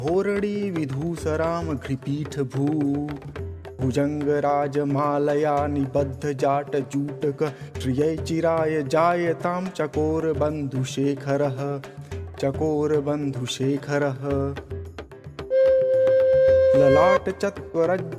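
Listening closely, nothing in the audio stood out as a technical fault at any point.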